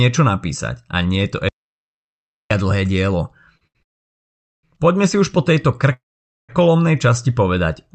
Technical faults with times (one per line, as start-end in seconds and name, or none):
1.49-2.51 audio dropout to silence
3.57-3.77 short stall from a late packet
3.83-4.65 call audio freeze
5.93-6.51 call audio freeze